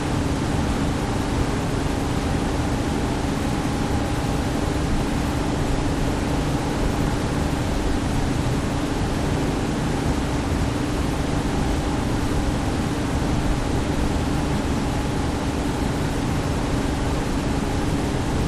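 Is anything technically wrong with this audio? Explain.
No, no technical faults heard.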